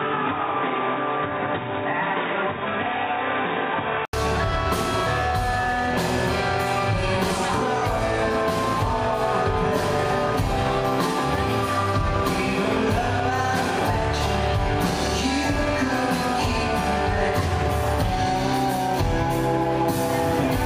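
Input switched to a poorer device, 0.0 to 4.13 s: the sound is dull and boxy, with nothing above 3.8 kHz and a faint extra noise floor, then opens up after an 80 ms silence at 4.13 s with little level change. The cause is likely a narrower-band input taking over.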